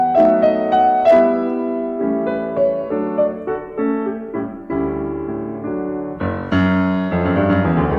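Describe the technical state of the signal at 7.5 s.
Hard clipping at 7.53 s, where the music briefly exceeds what the signal path can carry by about 1 dB. The peak is sliced flat, and that squared-off top adds high harmonics, heard as a single short crackle on the loud moment.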